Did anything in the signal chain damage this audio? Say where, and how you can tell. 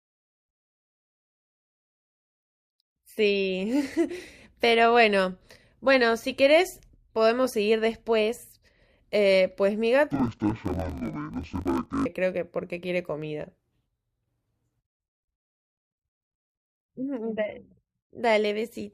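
Yes. From 10.12 to 12.06 s, a sample-format conversion stage reads interleaved stereo as planar in 20 ms blocks, playing each block's halves together at half speed. The speech drops an octave, sounds doubled, and chops at 50 Hz.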